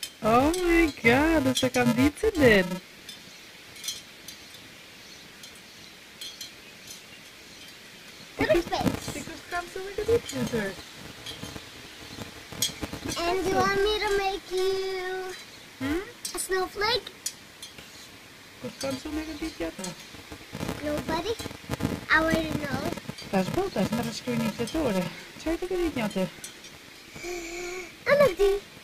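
A filter restarted on every block, losing its state and beginning each block from silence, so every block opens with a small transient. Throughout the audio this produces a steady 375 Hz buzz that rises and falls with the signal's level, which fits a 128-sample block.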